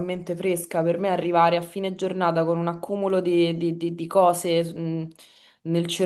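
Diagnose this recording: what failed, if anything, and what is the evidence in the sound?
Nothing in the recording points to a failure at any stage of the chain. The speech runs without any audible event that calls for a diagnosis.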